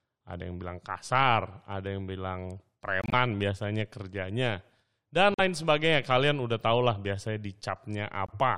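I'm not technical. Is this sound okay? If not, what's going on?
No. Parts of this speech's compressed data got damaged, and the player, unable to decode them, swapped in silence instead. That's a corrupt frame muted fault. You hear abrupt gaps at 3.02–3.13 s, 5.34–5.40 s and 8.26–8.30 s, with timing intact.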